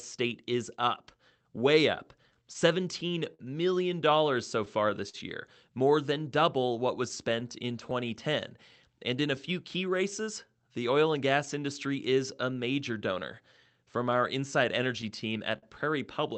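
Clock drift between sender and receiver runs through the whole recording. The sending side's clock runs roughly 4% slow, so the receiver's jitter buffer keeps draining and has to be topped up again and again. The result is a chain of small timing hiccups spread unevenly across the speech, rather than one obvious event. The audio band stops at about 8 kHz with the usual call-codec coding noise, which fits Opus at around 32 kbps on a normal call path.

Repeated timing corrections follow from 1.11 s to 15.17 s. To keep pace with the slow sender, the receiver keeps repeating short slices of audio, always stretching and never cutting, at uneven spacing. Together these add roughly 0.4 s, and the pace runs at about 98% of normal. Each edit is small. Where they are noticeable, they come across as tiny stutters or a faintly dragging, unsteady tempo.

Scattered short gaps appear in three stretches where packets arrived late or went missing. 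The receiver covered each hole by extending the preceding sound. From 2.34 s to 5.17 s there are around seven gaps, the longest around 50 ms, heard as brief smears. From 7.08 s to 11.49 s there are about seven more, but each is only a tick of roughly 10 ms or less. From 13.52 s to 15.66 s a few more occur, the longest around 40 ms.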